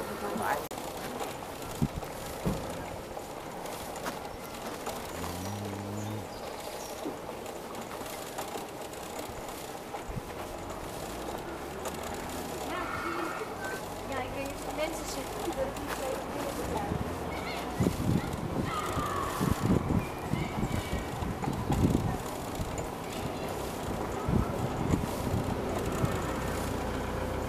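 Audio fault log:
0.68 to 0.71 s, CD skip: the playback goes silent for roughly 30 ms and picks up again at a different point in the audio rather than where it stopped, because the laser has jumped to another turn of the disc's spiral. That displaced continuation is what separates it from an ordinary dropout or buffer gap, where the sound resumes exactly where it left off after the silence.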